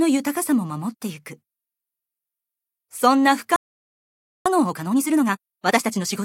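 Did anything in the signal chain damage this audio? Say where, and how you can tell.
Yes. At 3.56 s the sound cuts to silence for about 0.9 s, resuming at 4.46 s. That gap is a playback stall, likely the player's buffer running dry or its output thread being blocked until data arrived again.

From 4.46 s to 6.14 s the audio runs hurried, about 1.5 times normal speed, yet at unchanged pitch. This is time-compressed catch-up: the player drops short slices and cross-fades the joins to work off the backlog left by the stall.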